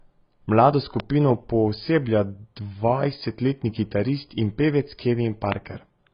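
The speech is dull and smeared the whole way through with nothing above 5.1 kHz, likely heavy AAC compression at a low rate, around 16 kbps. A loud pop hits at 1.00–1.02 s, about 10 dB over the speech, then another at 5.52–5.54 s, about 20 dB over, likely voltage spikes from a plug, switch, static or driver glitch.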